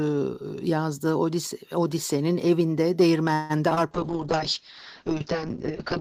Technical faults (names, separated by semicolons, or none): call audio freeze; short concealed packet loss; call bitrate drop